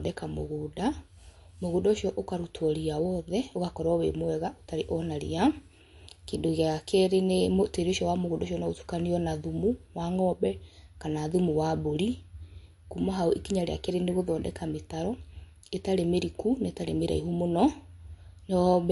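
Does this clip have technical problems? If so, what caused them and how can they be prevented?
Yes. MP3 compression throughout: nothing above 11.3 kHz, with plainly audible watery, swirling sibilants, likely from encoding at a bitrate around 50 kbps. Encoding at a higher bitrate or keeping a lossless copy prevents it.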